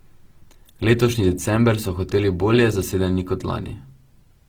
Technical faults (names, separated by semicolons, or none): Opus compression